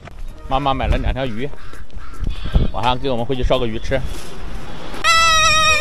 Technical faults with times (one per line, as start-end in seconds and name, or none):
1.26-5.81 DC step